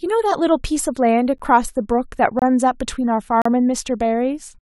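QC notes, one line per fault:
1.38 s, 2.39–2.42 s, 3.42–3.46 s: gap between stream segments. Hard-edged silent holes of about 13, 25 and 36 ms fall at the 1-second segment joins, where mismatched timestamps leave time the player fills with silence; nothing is dropped.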